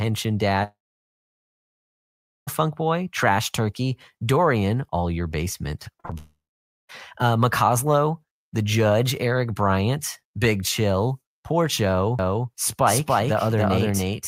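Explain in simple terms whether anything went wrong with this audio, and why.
Several things went wrong. From 0.63 to 2.49 s there is a long network dropout, likely from the connection stalling. About 1.8 s of speech never arrived. The receiver briefly stretched the last sound into a fading buzz, then left near-silence until the audio resumed. A shorter long network dropout follows at 6.18 to 6.91 s, losing about 0.7 s the same way.

Just before that, from 5.97 to 6.14 s, repeated packet loss gives a choppy, robotic sound. Four small gaps, the longest about 38 ms, were each patched by repeating the previous sound, so roughly half of that short stretch is filler.

From 12.19 s to the end, a doubled audio track appears, likely a second capture path mixed in. A copy of the speech, roughly as loud as the original, trails about 0.3 s behind with no room echo. It starts abruptly.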